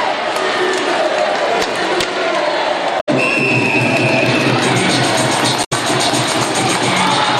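At 2.99 s and again at 5.63 s there's a short burst of damaged data in a compressed stream, each lasting about 0.1 s. A stretch of the encoded bitstream got corrupted, so the decoder couldn't make sense of those frames, lost its place, and had to hunt for the next valid frame header before picking the sound back up. What you hear is a quick glitch, a chirp, squawk, click or short hole, breaking through the audio at each spot.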